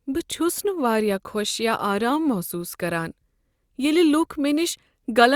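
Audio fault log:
No technical faults are audible anywhere in the speech recording, and the signal holds steady throughout.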